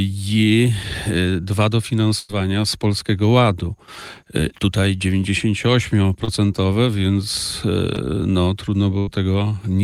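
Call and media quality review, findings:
Burst of packet loss at 2.19–2.31 s and 8.99–9.09 s. Receiver jitter buffer/PLC held the last sound for about 90 ms and 85 ms, fading it out, and roughly 100 ms and 80 ms of audio never returned. Spectrogram shows frozen, smeared bands decaying into a hard restart.

Short concealed packet loss at 6.25–6.29 s and 7.95–7.98 s. Decoder concealment bridged a roughly 20 ms dropout with extrapolated sound, about 26 ms and 12 ms, then crossfaded back. Brief smear or wobble. Spectrogram shows a thin blurred slice.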